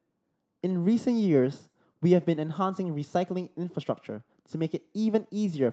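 Speech carried over a WebRTC call path with no faults found, the top end stopping at 8 kHz in line with the call codec's bandwidth.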